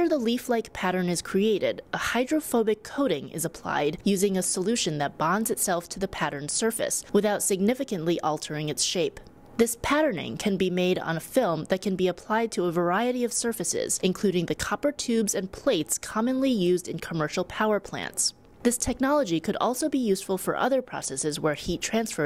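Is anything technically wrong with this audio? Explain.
Yes. From 18.93 to 20.92 s a fine hiss and roughness ride on the sound, tracking its louder, brighter moments. This is sample clock jitter: the converter's clock wobbles by roughly a microsecond or two, so samples land early or late, producing error around 40 dB down, worst where the waveform changes fastest.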